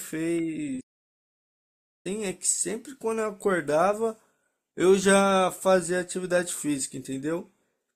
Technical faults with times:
0.80-2.07 playback stall

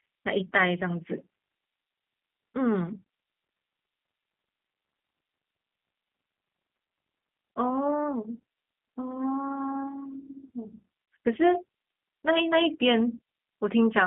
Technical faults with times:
0.00-14.07 G.729 codec
11.06-11.08 VoIP packet loss concealed by the speech codec

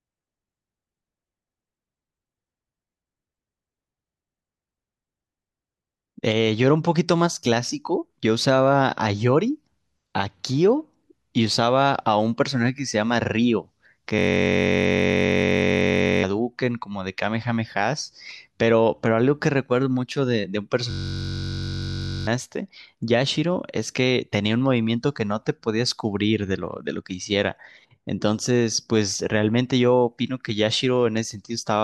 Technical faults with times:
14.19-16.23 system hang loop
20.91-22.27 system hang loop

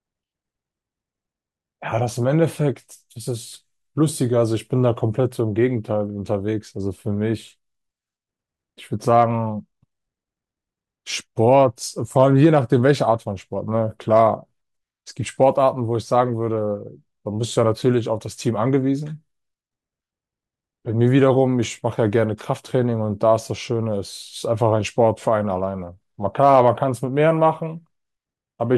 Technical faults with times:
9.15-9.23 hard clipping
12.20-12.90 hard clipping
26.40-26.83 hard clipping

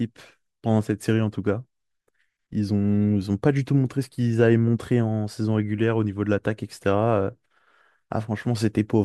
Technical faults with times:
6.58-9.04 resampler restarted on every block

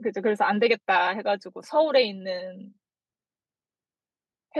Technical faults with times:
none

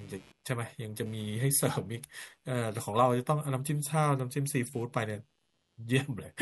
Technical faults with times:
0.00-6.41 computer activity noise

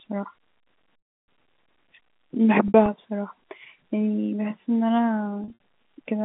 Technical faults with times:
0.98-1.28 packet loss with pitch repetition
2.68-2.88 packet loss with pitch repetition
5.44-5.57 packet loss with pitch repetition

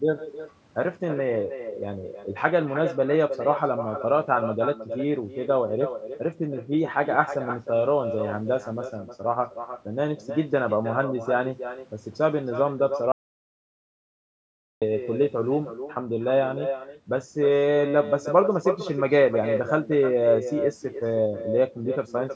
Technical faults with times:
0.00-22.35 echo with no canceller
13.12-14.82 audio dropout to silence

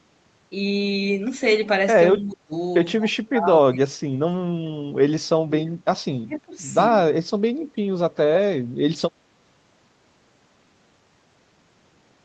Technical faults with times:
2.15-2.54 speech suppressed in double talk
2.99-4.19 speech suppressed in double talk
5.22-5.87 speech suppressed in double talk
6.26-6.58 speech suppressed in double talk

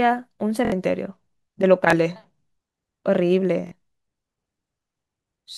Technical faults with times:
0.65-0.72 repeated buffer
1.90-1.93 repeated buffer
3.67-3.72 repeated buffer

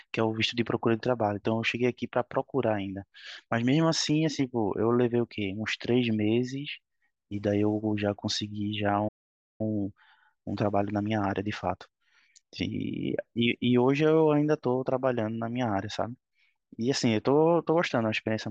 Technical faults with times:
9.08-9.61 playback stall
9.61-12.61 time-compressed catch-up

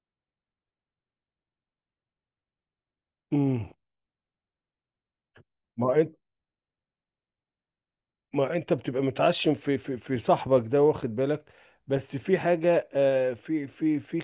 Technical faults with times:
none

